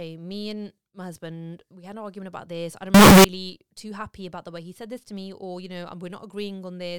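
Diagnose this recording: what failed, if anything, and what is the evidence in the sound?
The failure sits in sample-format conversion. Right after "argument about this I'm", from 2.94 to 3.24 s, the sound turns into a blast of loud, harsh distortion for about 0.3 s, with nothing quiet left in it, and then "too happy about the" comes through clean. That's likely signed and unsigned mixed up: flip the top bit and every zero crossing jumps across the whole range, which fits 16-bit samples being misread.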